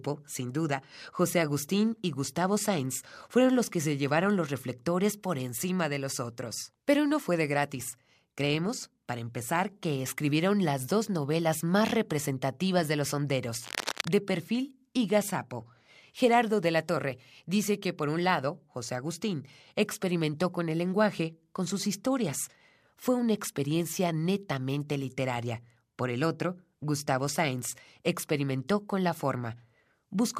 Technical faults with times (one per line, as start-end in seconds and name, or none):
13.62-14.11 cable scratch noise